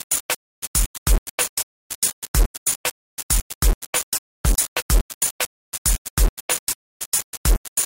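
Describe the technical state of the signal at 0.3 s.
At 0.3 s, as throughout, the sound carries low bit depth without dither: likely rounding to about 3 bits leaves a coarse, grainy distortion that tracks the signal and vanishes in silences.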